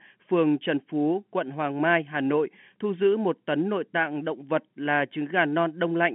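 No technical faults can be heard in the clip. The speech arrives through G.711 telephone coding, with the familiar narrow line band of roughly 150 Hz to 3.4 kHz and nothing above about 3.7 kHz.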